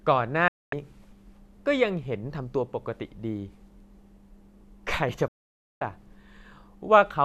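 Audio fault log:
0.48 to 0.73 s, digital broadcast dropout: the receiver mutes for about 0.24 s after losing frames, with a 3 ms fade; waveform shows flat silence, spectrogram a blank vertical gap.
5.28 to 5.82 s, digital broadcast dropout: a longer mute of about 0.53 s, again fading in 3 ms; the lost audio never returns, leaving an empty column on the spectrogram.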